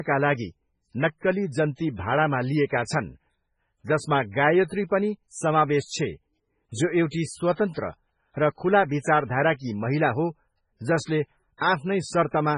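From start to finish the speech carries heavy damage of the kind MP3 compression leaves, likely from a very low bitrate, around 16 kbps. Nothing survives above 10.5 kHz, and the weak frequency lines that remain flicker on and off between frames, so s sounds turn to chirping swirl and consonant onsets smear. A simple low-pass filter would dull the top evenly; here the band below the cut also warbles and churns.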